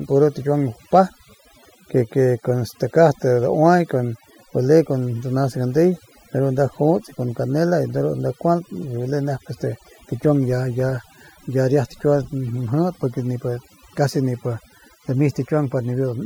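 A speech recording runs its whole length under overdone noise removal. A noise reduction stage was pushed too hard. It cuts individual frequency bands deep, or shuts them off, wherever they sit close to its noise estimate. Quiet detail in the voice falls below that line and is removed too. The pauses drop to near silence, dotted with small twinkling artefacts.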